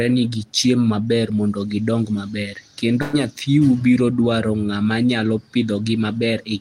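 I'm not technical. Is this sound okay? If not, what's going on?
No. There is one problem, a burst of packet loss, from about 3.01 to 3.15 seconds. It comes right after "maber mondo gidong maber" and just before "nyathiu biro dwaro ng'ama". A few pieces of the audio never arrived in time. The receiving end covered the gap by stretching the last sound it had and letting it fade. That filler lasts about 116 ms. About 120 ms of real speech is lost there, so the speech jumps ahead when it returns.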